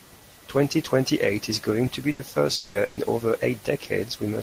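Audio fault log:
2.11 to 2.21 s and 2.85 to 2.99 s, burst of packet loss: the speech briefly freezes into a held buzz or fading hiss, about 80 ms the first time and 120 ms the second. It then resumes with that much speech skipped. A short run of packets never arrived in time, so the receiver stretched the last sound it had and faded it down before jumping ahead to the next audio that arrived.
2.55 to 2.77 s, long network dropout: the speech stalls into a smeared, fading continuation of its last sound for about 200 ms, with no stretch of true silence, then picks up again with roughly 200 ms of speech gone. The likely cause is a network interruption long enough that the receiver could only keep extending and decaying the last sound until audio arrived again.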